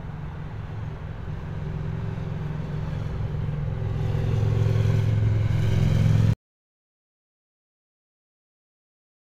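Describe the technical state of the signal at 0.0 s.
At 0.0 s the signal is intact, with no audible technical fault.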